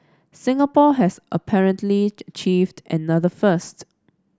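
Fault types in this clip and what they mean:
No faults are audible anywhere in this speech clip.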